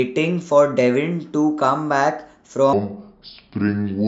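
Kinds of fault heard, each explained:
wrong sample rate: from 2.73 s, speech plays at 0.69 speed and 6.45 semitones lower, consistent with 32 kHz audio played at 22 kHz unconverted.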